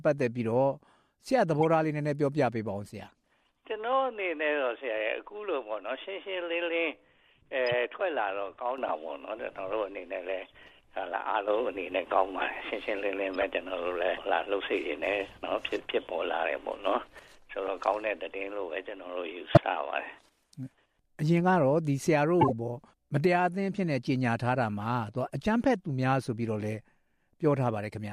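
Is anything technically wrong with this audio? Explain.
Yes. Six bursts of corrupt frames were decoded, at 1.60–1.64, 3.08–3.11, 7.67–7.73, 13.34–13.43, 19.41–19.58 and 22.41–22.52 s. Damaged bits in each compressed frame were played anyway, so misread gains put energy at wrong frequencies, producing brief chirps and noise bursts lasting a few frames each. They range from faint, about −50 dBFS, to prominent, around −10 dBFS. Unlike a lost-packet dropout, which leaves a gap or a smoothed-over hole, a corrupt frame puts wrong energy into the sound.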